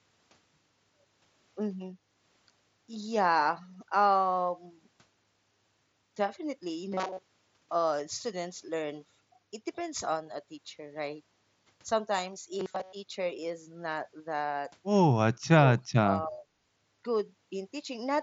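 From 6.92 to 7.23 s, and again from 12.60 to 12.93 s, the speech goes metallic: robotic sound from repeated short buffers. There's a rigid buzz at 188 Hz riding on it, which fits the last roughly 5.3 ms chunk being replayed over and over while fresh audio was likely arriving too late. Most of each stretch is repeats, so the words survive only as a rough outline under that fixed pitch.

Near the end, the speech suppressed in double talk shows up as three quick dropouts: 15.47 to 15.63 s, 15.86 to 16.04 s, and 16.24 to 16.54 s. The level falls by around 30 dB, then 40 dB, then 25 dB, chopping the voice into pieces. That's likely an echo canceller mistaking this talker for loudspeaker echo while the far side spoke, and ducking both. Through the Bluetooth mSBC headset codec path, everything sits below about 7.7 kHz.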